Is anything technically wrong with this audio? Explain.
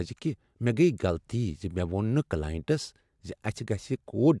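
No, nothing is technically wrong.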